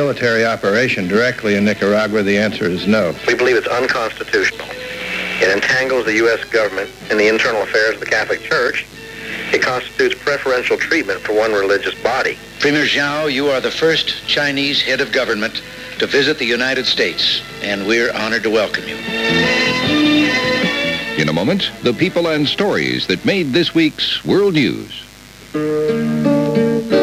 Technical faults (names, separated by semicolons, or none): mains buzz